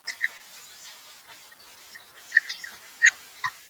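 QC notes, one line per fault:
0.37–0.41 s, short concealed packet loss: about 20 ms of the speech failed to reach the decoder in time, so the receiver generated a 20 ms stand-in. It extended the sound just before the gap, carrying on its pitch where voiced and shaped noise where not, then blended back into the real signal. The result is a brief smear or wobble where the genuine audio was replaced by that continuation.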